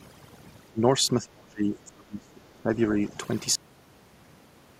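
Overdone noise removal runs through the whole clip. The noise reduction is set so aggressively that frequency bands near its noise estimate are pulled down or switched off, taking quieter parts of the speech with them. The gaps fall to near silence with twinkling specks.

Speech suppressed in double talk comes next, first from 0.72 to 0.82 s and then from 1.07 to 3.17 s. The voice drops by about 20 dB in the short dip and by as much as about 30 dB across the two-second stretch. This is likely an echo canceller that couldn't tell the talker from loudspeaker echo while both sides spoke, so it turned everything down.

A cut-off end occurs at 3.55 s. The audio stops mid-sound and falls straight to digital silence with no natural decay, because the final buffers were never written or played out.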